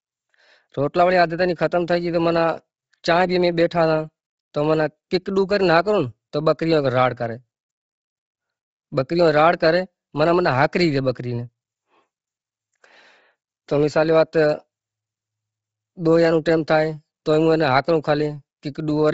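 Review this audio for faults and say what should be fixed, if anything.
The whole clip has a breathy, grainy edge on the speech, and there's nothing above 7.8 kHz, which points to Bluetooth LC3 compression as the likely cause. The codec starves the upper spectrum, zeroes much of it and fills the gaps with noise, and the heavy damage fits a low rate of around 24 kbps with 7.5 ms frames. To prevent it, record over a wired or higher-bitrate link instead of a low-rate LE Audio connection.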